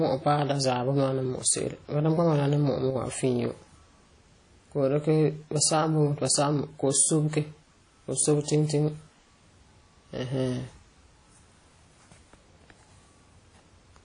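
From start to end, the speech has likely been through WMA compression at a low bitrate, and the sound fits an encode at 32 kbps. A transform codec working in long blocks lets its quantisation noise spread across tens of milliseconds, and with so few bits it drops weaker spectral lines entirely. The codec damage is plainly audible: a ringing, washy quality, hiss that breathes with the signal, and nothing above 10.1 kHz.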